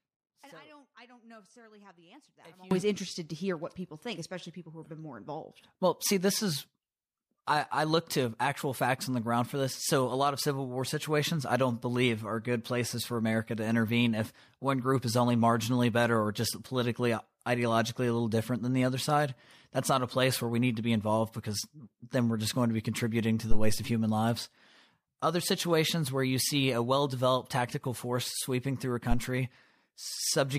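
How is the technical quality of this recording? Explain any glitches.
The recording has two clear technical faults.

From the very start until 2.71 s, there is an audio dropout to a faint residue. The speech is already gone when the clip opens. Only a faint leak remains, roughly 25 dB below normal level. The likely cause is a live path that lost its signal. Then the sound returns abruptly.

At 23.51 s, there is a phantom power thump lasting until about 23.81 s. A supply switched on a live input sends a voltage step through the coupling capacitors. It sounds like a deep thump that dies away in about 68 ms.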